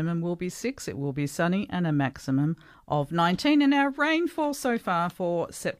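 No faults are audible anywhere in this speech recording.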